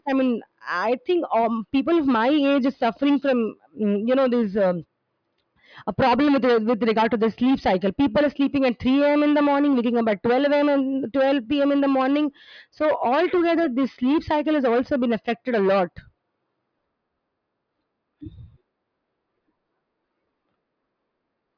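Nothing stood out as a technical problem on listening to this speech recording.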